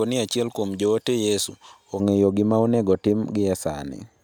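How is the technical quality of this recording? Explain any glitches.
The recording has one fault, in its first two seconds. From 0.0 to 2.0 s, just before "gima onego otim", pre-emphasis was left on: the treble boost was never undone, leaving 10 kHz about 11 dB above 1 kHz (consistent with a J.17 curve), so the speech sounds thin, bright and sibilant.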